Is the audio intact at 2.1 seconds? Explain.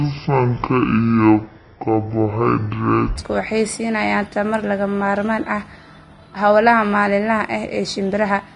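No. At 2.1 seconds the sound is deep, slow and dragged, pitched roughly ten semitones low. This section at the wrong speed runs from the start to about 3.16 s, playing at 0.542 times its proper rate. The likely cause is that the passage was fitted to the wrong clock during editing or playback, so speed and pitch both fall together. The stretch ends abruptly when normal speed returns.

The same moment is also hissy and grainy, with a dull top end, and consonant attacks sound smeared. This is Vorbis compression, likely at a low setting around 33 kbps, where the encoder lowers its cut-off and quantises the upper spectrum so coarsely that fine detail turns into noise. The damage is plainly audible here and across the whole clip.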